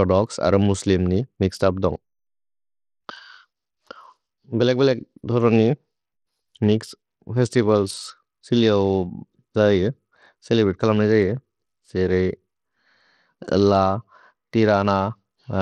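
Across the whole speech clip the treble flickers in and out over a gritty, grainy noise floor, with nothing above 18.5 kHz, likely from Bluetooth SBC compression at a low bit pool, consistent with about 80 kbps. Unlike MP3's swirly pre-echo, this damage is coarse and band-wise, with crude high-band dropouts rather than a smooth cutoff.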